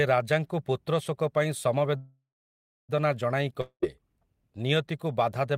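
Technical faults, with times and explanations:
1.97–2.91 s, call audio freeze: the sound stalls and trails off into a fading buzz, then sits silent for about 0.64 s before picking up exactly where it left off. Likely the packets got held up and the jitter buffer ran dry, so nothing's lost, but everything after lands about 0.91 s late.
3.61–3.84 s, long network dropout: here the sound smears into a short fading hiss, with about 70 ms of silence at the end, and comes back further along. Likely packets never arrived at all, so roughly 220 ms of audio is simply gone.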